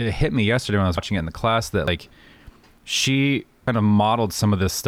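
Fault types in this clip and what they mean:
Audio missing between chunks: the audio was likely processed in 1-second chunks, losing about a tenth of a second at each changeover and joining the edges directly, so the speech jumps forward at 0.98, 1.88, 2.78 and 3.68 s, starting after "yesterday when I was".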